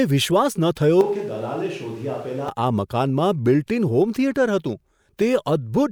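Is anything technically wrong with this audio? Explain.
Yes. From 1.01 to 2.49 s the speech abruptly turns roomy and hollow, loses bass, drops about 5 dB and picks up more background noise. This is likely a switch to a distant microphone. Unlike added reverb, the noise floor rises too, and the sound snaps back just as suddenly.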